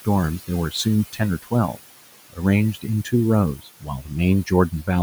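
A speech recording with noise suppressor artifacts throughout: the room noise, about 16 dB below the voice, is pushed down by about 17 dB between phrases, leaving a residue that shows on a spectrogram as patchy, flickering speckles in the gaps. Speech cut by the noise suppressor occurs at 0.39–1.8 s (dips up to about 18 dB, roughly a third of a second affected in total), 2.74–3.13 s, 3.57–4.11 s and 4.45–4.88 s (about 12–14 dB), where soft consonants and word endings sound swallowed and appear on the waveform as abruptly shrunken tails and gaps in the high-frequency energy.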